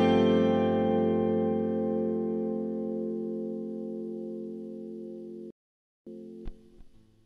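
A rebuffering stall runs from 5.51 to 6.07 s: the player exhausted its downloaded audio and halted until more data arrived. The sound drops to silence for 0.56 s, then picks up exactly where it stopped, adding time without losing any material.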